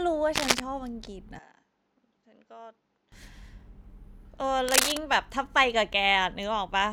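From 0.35 to 0.60 s, a burst of cable scratch noise rides over the speech, sitting a little louder than the speech itself. It is dense and irregular, a scraping rustle rather than isolated clicks, which sets it apart from digital dropouts or vinyl-style crackle. It is likely a worn cable, connector or control being moved, so that its contact resistance jumps around rapidly. The same scratching returns from 4.68 to 4.97 s.

Between 1.39 and 3.12 s the input switched to a poorer device. The speech turns dull and boxy, with nothing above 7.6 kHz, drops by roughly 10 dB, and picks up a faint new background noise well below the speech. The change happens instantly, with no gap at the switch. The likely cause is the system swapping to a narrower-band microphone or headset profile mid-recording. A simple EQ or filter change would leave the level and noise floor alone, whereas here the tone, level and background all shift together, as they do when a different device takes over.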